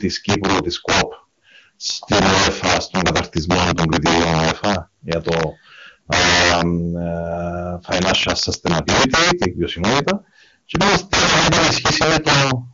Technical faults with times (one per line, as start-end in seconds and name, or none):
0.00-12.73 integer overflow